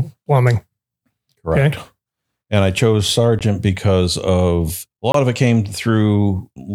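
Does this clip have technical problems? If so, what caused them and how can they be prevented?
Yes. A short hole at 3.39 s, after "I chose", and a short hole from 5.12 to 5.14 s, after "because of a", are blocks of digital silence. The output drops straight to silence and back with no fade. The 23 ms gap fits a 1024-sample buffer that went unfilled in time. Giving the audio processing more headroom, through larger buffers or a lighter load, prevents these dropouts.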